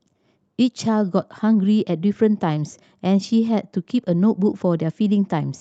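Clock drift between sender and receiver runs through the whole speech clip. The sender's clock runs roughly four percent fast, so the jitter buffer keeps overfilling. From 0.23 s to 5.59 s, repeated timing corrections trim short pieces at uneven intervals to hold the buffer steady. The result is a slightly rushed tempo, near 104 percent speed, above the Opus call path's audio band limited to about 8 kHz.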